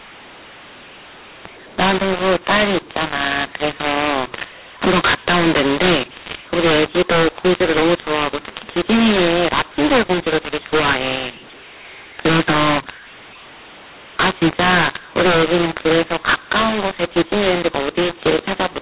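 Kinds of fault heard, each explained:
mu-law and A-law mixed up, throughout: A-law telephone samples decoded as mu-law scramble the levels, making the speech harsh and distorted and filling pauses with noise.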